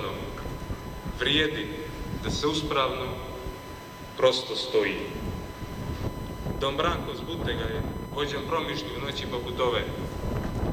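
From the very start and all the way through, there's a steady USB whine sitting at 1 kHz, and that's also where it's strongest. It comes from the bus pulling current in regular 1 ms frames, and that ripple sneaks in through the power or ground and lands in the audio path. You hear it as a thin, fixed-pitch tone that never drifts, and it's not subtle: somewhere around 20 dB under the sound itself.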